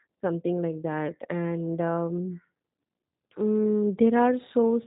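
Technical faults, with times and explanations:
Throughout: G.729 codec. The speech is rebuilt from a vocal tract filter, a pitch predictor and a few pulses per 5 ms half-frame, which gives it a plainly audible rough, synthetic buzz consistent with an 8 kbit/s stream. Nothing above 3.8 kHz is left. A simple telephone-band filter would make the audio narrow but keep the voice smooth. This grainy, slightly robotic texture comes from the sparse pulse excitation and sets the codec apart from plain band-limiting.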